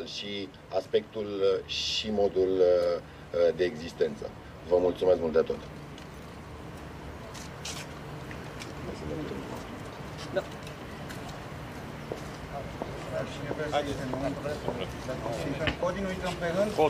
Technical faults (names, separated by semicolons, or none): none